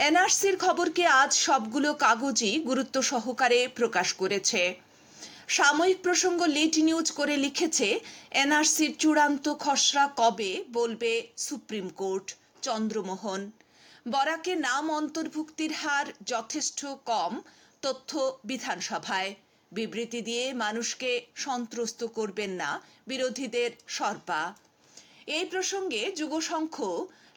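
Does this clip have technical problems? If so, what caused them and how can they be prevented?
Yes. At 10.38 s the sound abruptly drops by about 6 dB and stays lower until the end. This is likely one channel dropping out: with a stereo channel lost, the mono sum keeps only half of the shared material. Prevent it by securing connectors and cables and monitoring both channel meters during recording.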